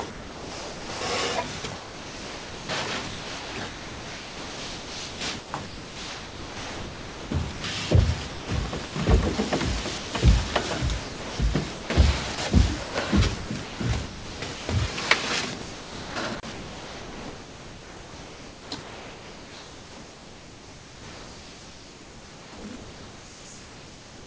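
From 0.11 to 1.01 s the sound drops out entirely. For 0.9 s it gives way to steady synthetic hiss. This is sound dropped by the voice detector. The sender likely judged the opening to be background and sent comfort noise instead. The same happens from 9.98 to 10.13 s, a 0.15 s gap.

From 1.58 to 7.64 s the sound is chopped by the voice detector. Sending likely switches on and off repeatedly. About 4.92 s is replaced by comfort noise. Further chopped stretches follow from 8.30 to 8.96 s, with 0.33 s replaced, and from 11.00 to 14.69 s, with 1.5 s replaced. The longest runs from 15.62 s to the end, with about 8.08 s replaced. Throughout, nothing is heard above 8 kHz, which fits a G.722 call path.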